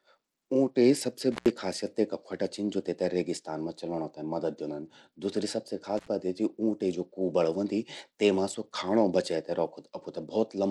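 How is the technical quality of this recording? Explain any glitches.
The quality's held back by two things: a codec that's squeezing the whole clip, and a couple of brief dropouts from a dodgy connection.

All the way through, the speech has a dulled, gritty top end where the treble thins out and flickers, with a rough grain riding on it. That's most likely Bluetooth SBC compression running at a low bit rate, somewhere around 96 kbps. SBC splits the signal into a handful of wide bands and hands out bits without any real model of hearing, so the upper bands get starved and everything else is coarsely quantised. The damage is plainly audible.

Then there are two intermittent contact glitches, at 1.32 to 1.50 s and again at 5.97 to 6.08 s. The signal path opens for a moment, about 100 ms the first time and about 73 ms the second. The sound drops out with crackle at each edge, which is what a loose plug or cable does when it briefly loses and regains contact.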